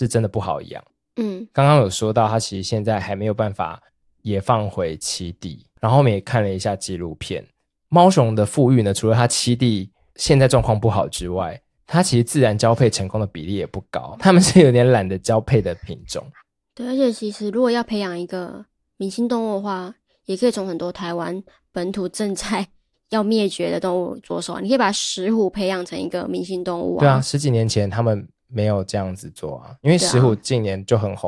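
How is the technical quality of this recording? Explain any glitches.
Nothing in the technical quality of this speech recording stood out on listening, so there are no glitches to explain.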